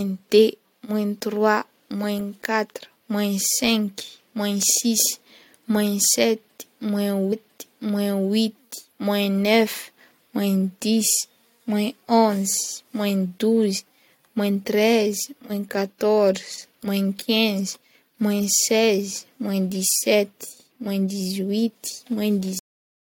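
A speech recording that stops abruptly at 22.59 s: the sound is chopped off mid-utterance and drops straight into digital silence, with no natural decay, and that silence runs to the end of the file. This is a cut-off end. The final stretch of audio was never written out or played back, most plausibly because the last buffers were lost when recording or rendering stopped, so the waveform simply ends where the data ran out.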